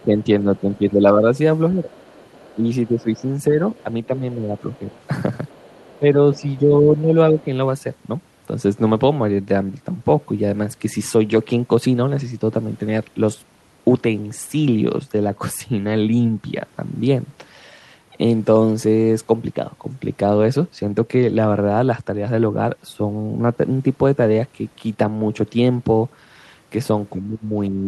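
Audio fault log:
0.00–1.93 s, 2.55–4.92 s, 5.99–7.46 s, 27.14–27.87 s: speech suppressed in double talk. The speech sinks by around 10 dB at its deepest and turns dull and patchy in broken pieces, adding up to about a second in each of the first two stretches and somewhat less in the third. The likely cause is an echo canceller that heard both ends at once, could not tell the near talker from the loudspeaker's echo, and turned down everything it picked up.
0.23–0.60 s, 1.92–3.16 s, 3.76–6.60 s: other side's voice leaking through. A faint second voice sits well under the main speech, about 35 dB down in the first short scrap and about 30 dB down in the two longer stretches. It overlaps the dips around it. Its likely source is the far end playing from the device's loudspeaker back into the microphone, with the echo canceller leaving a residue it failed to remove.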